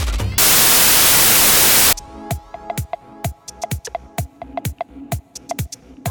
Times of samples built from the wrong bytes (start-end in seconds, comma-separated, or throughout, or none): 0.38-1.93